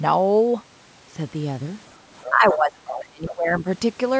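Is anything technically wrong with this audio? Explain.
Yes, two related faults appear in the second half of this speech clip.

Other side's voice leaking through, at 2.23 to 2.31 s and again at 2.51 to 2.56 s: a second voice briefly surfaces behind the talker, likely because the device's loudspeaker played the far end into its own microphone and the echo canceller left a residue. The scraps are short, the first about 15 dB below the talker and the second louder, about 10 dB below.

Speech suppressed in double talk, from 2.29 to 3.67 s: the talker's level sinks, dropping at its deepest by about 25 dB and affecting roughly one and a half seconds in total. With both sides active together, the canceller likely could not tell its own talker from the echo and pulled everything down. The result is speech that dips across this stretch.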